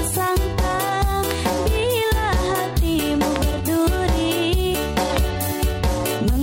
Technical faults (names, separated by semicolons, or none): loud pop